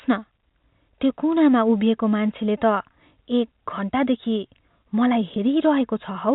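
Packet loss with pitch repetition at 5.34 to 5.36 s briefly interrupts this speech recording. About 20 ms of audio went missing, which fits a single lost 20 ms packet. The receiver filled the hole by looping the last pitch period it had, so the gap is heard as a tiny held, buzzy smear on the voice rather than a dropout, before the real signal resumes. The stream runs through G.711 A-law telephone coding, with its 4 kHz upper limit.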